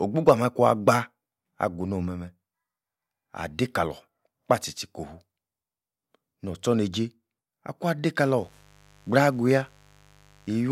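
A speech clip where mains buzz enters at 8.38 s and runs to the end: 50 Hz switching spikes make a raspy drone roughly 30 dB below the speech, shown as evenly stacked harmonic lines on a spectrogram.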